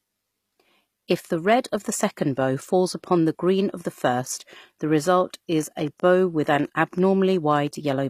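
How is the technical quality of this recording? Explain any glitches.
The recording has two audible problems: codec damage throughout and a burst of clicks near the end.

HE-AAC compression runs through the whole clip, likely at a rate fitting 24 kbps. The treble is rebuilt from copied lower bands, so s sounds turn gritty. A spectrogram shows smeared upper bands and nothing above 14.9 kHz.

A train of clicks runs from 5.59 to 7.93 s, just after "the first the result". Around fifteen similar pulses arrive at an uneven 5.6 per second, each about as loud as the speech, likely from interference or a faulty connection. They appear as thin vertical spikes in the waveform.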